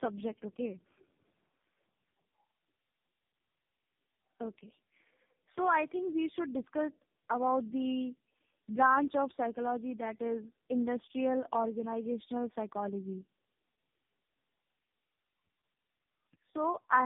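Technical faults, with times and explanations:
Throughout: tandem speech coding, three speech codecs in a row ending in AMR-NB, so each re-encodes the last one's damage, giving rough, warbly, muffled speech cut off above 3.7 kHz.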